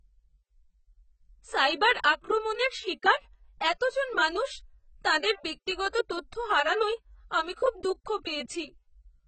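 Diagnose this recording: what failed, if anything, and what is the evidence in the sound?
The damage sits at the codec stage, and it's most likely AAC compression. Across the whole speech clip the top end stops dead around 8.5 kHz, so everything sounds dull and the sibilants lose their edge. The smearing is heavy, which points to a very low rate, something like 16 kbps AAC-LC. At that rate the encoder drops the cut-off and coarsely quantises each frame's spectrum, so detail gets thrown away before it's ever stored.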